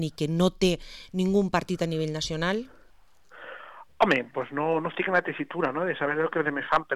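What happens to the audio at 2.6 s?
Nothing goes wrong at 2.6 s; the audio passes through that moment intact, with no dropout, click, glitch or other fault.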